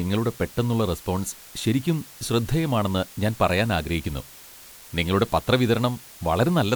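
Throughout, low bit depth with dither, fitting 7 bits, adds even hiss roughly 25 dB below the speech: a flat broadband floor on the spectrogram.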